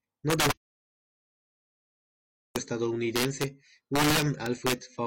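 A gain or sum stage in the signal path lets values run past the largest integer instead of limiting them, so the loudest peaks wrap around to the opposite sign. With the level pushed about 6 dB too hot, around one or two percent of samples cross that limit. This is integer overflow, and throughout the speech it turns each strong peak into a violent, snapping crack, far harsher than ordinary clipping.

From 0.52 s to 2.55 s the input feed is lost, likely through a dropped connection or a momentary mute, while the recording carries on writing silence. This audio dropout to silence cuts the speech off abruptly and resumes it just as abruptly about 2.03 seconds later. The gap in between is dead digital silence with no room tone at all, and whatever was said during it is gone.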